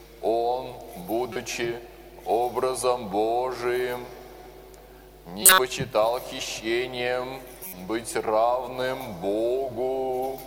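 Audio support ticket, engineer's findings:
Three short events: 1.33–1.38 s, 5.43–5.59 s, 7.63–7.73 s. Corrupt frame decoded: flipped bits in the compressed stream, decoder played the frames anyway, so energy lands at the wrong frequencies. First hits a couple of frames, peaks about −15 dBFS. Second is the nasty one, roughly seven frames, about −5 dBFS. Third is a few frames, faint at about −25 dBFS. Check the transport/storage layer feeding the decoder.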